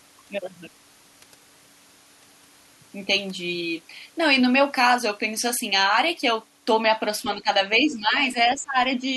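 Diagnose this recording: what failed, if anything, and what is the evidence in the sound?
Speech suppressed in double talk, at the call-processing stage: the level drops by about 10 dB between 7.24 and 7.49 s, for around 150 ms in total, then by as much as 20 dB between 7.8 and 8.76 s, for roughly 700 ms. On a waveform the envelope sags or collapses in patches. The likely cause is the echo canceller's suppressor ducking the near talker while both sides spoke at once.

The other side's voice leaking through, also in call processing, appears as a brief scrap from 8.45 to 8.51 s, roughly 30 dB below the talker's speech. It is faint, and it falls inside the suppressed stretch. On a spectrogram it would show as a short, low-energy smear with its own pitch track, separate from the talker's harmonics. This is likely residual loudspeaker echo that the canceller failed to subtract from the microphone signal.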